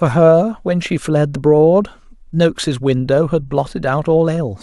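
No technical faults can be heard anywhere in the recording.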